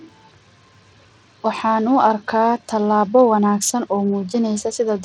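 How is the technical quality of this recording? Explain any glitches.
The recording is compromised throughout by Bluetooth SBC compression. From start to finish the speech has most likely passed through a low-rate Bluetooth link, whose damage fits roughly an 80 kbps SBC stream. SBC splits the signal into a few wide sub-bands and hands out bits by a simple rule with no model of hearing, so at this rate the bands are coarsely quantised. The result is plainly audible codec grit riding on the speech, with nothing above about 18.9 kHz.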